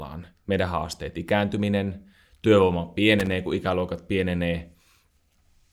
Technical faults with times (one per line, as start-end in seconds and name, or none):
3.20-3.32 loose connector crackle